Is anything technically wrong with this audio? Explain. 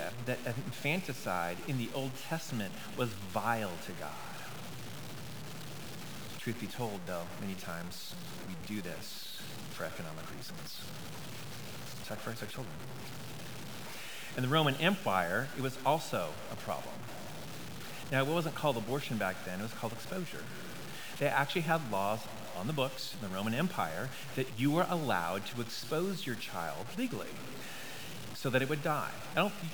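Yes. Throughout the speech, a harsh grain rides on every sound and tracks it closely, with quiet parts sputtering or dropping out. This is likely low bit depth without dither: truncation to roughly 6 bits, leaving the error only about 10 dB below the signal.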